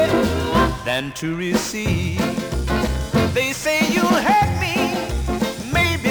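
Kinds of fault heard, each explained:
No technical fault can be heard anywhere in this audio. Nothing in the sound points to a problem in how it was captured, processed or played back.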